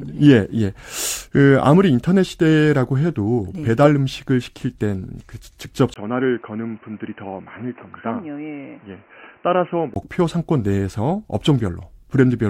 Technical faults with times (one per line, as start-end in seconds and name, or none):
5.94-9.96 input switched to a poorer device